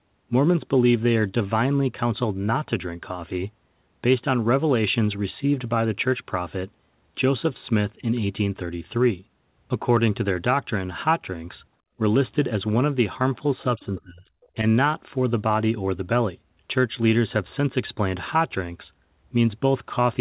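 Speech recorded over a call, where the echo canceller likely failed to fully remove the far end's loudspeaker sound from the microphone, so the other side's voice leaking through appears as a brief, very faint scrap at 13.58 to 13.64 s, roughly 30 dB below the talker. Just after, at 13.76 to 14.3 s, the canceller likely mistook simultaneous talk for echo, and this speech suppressed in double talk makes the talker's voice sink sharply, by around 25 dB at its deepest, for about half a second.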